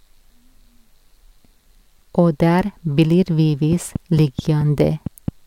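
From 3.73 s to 5.29 s a train of clicks runs over the speech: about seven near-identical pulses at a regular 4.5 per second, standing roughly 10 dB above the speech and audible in its pauses too. The steady spacing and repeated shape set it apart from random crackle or a one-off dropout click. The likely cause is electrical interference from nearby equipment or a faulty connection or power supply injecting pulses into the signal.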